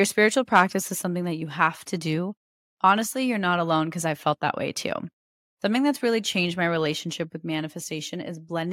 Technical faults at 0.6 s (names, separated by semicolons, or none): microphone overload